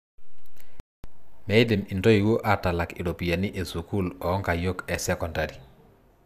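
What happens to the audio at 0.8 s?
At 0.80 s the speech cuts out mid-flow and the output sits silent until about 1.04 s, a gap of roughly 240 ms, before picking up again. That's a playback stall, likely the player running dry of data or its thread getting blocked.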